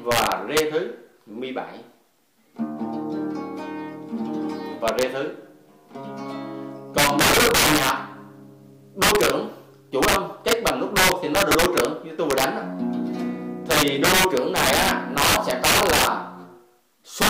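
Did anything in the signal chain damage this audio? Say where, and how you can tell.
Yes. A gain or mixing stage working in fixed-point integers let loud peaks run past full scale, and instead of being limited they wrapped to the opposite sign. This integer overflow is audible as harsh, violent cracks on loud passages at 0.12–0.60, 4.88–5.03, 6.98–7.90, 9.02–9.30, 10.03–11.85, 12.31–12.44, 13.71–16.07 and 17.21–17.29 s. Peaks there are driven about 2 to 10 dB over the limit, and each one flips across the whole range, which is far sharper than clipping.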